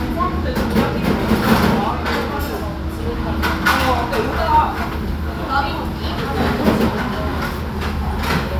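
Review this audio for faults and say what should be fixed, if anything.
No faults; nothing needs fixing.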